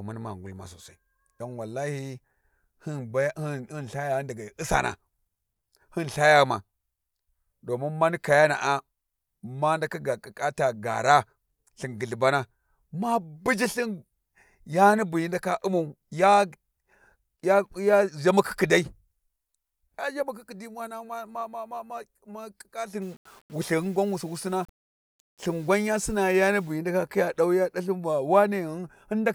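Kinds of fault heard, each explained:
Low bit depth without dither: from 23.0 to 26.7 s, just before "hyi ndaka khi ya", the speech turns grainy, a grit that follows it about 35 dB down. The likely cause is plain rounding to very few levels, consistent with 8 bits, without dither.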